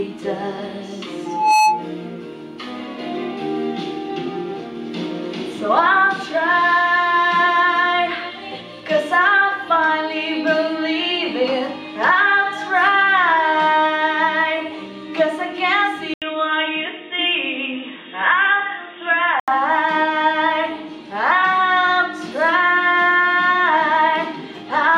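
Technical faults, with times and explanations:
1.25–1.90 s, loudspeaker feedback squeal: the microphone picks up its own loudspeaker, and at 859 Hz the loop gain tops unity. That single tone swells over roughly a third of a second into a squeal about 5 dB above the sound before it stops.
16.14–19.48 s, input switched to a poorer device: the recording likely changed to a lower-quality input. After an 80 ms gap, nothing above 3.8 kHz remains, so the sound turns dull and boxy, with a new noise floor about 50 dB down and little level change.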